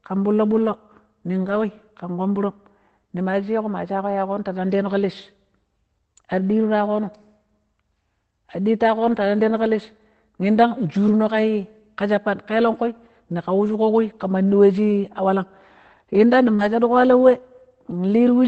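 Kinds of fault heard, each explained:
Lost packet rebuilt from error correction: packets went missing, but the next packet carried a low-bitrate backup copy, so the decoder played that and left no gap. You get short rougher, noisier patches at 0.53, 1.43, 8.95 and 16.59 s, about 0.1 to 0.14 s each, the last only 40 ms.
Short concealed packet loss: around 16.55 s about 40 ms never reached the decoder in time, so the receiver stretched the preceding sound to fill the hole and blended back in. It comes across as a brief smear running straight into the rebuilt patch.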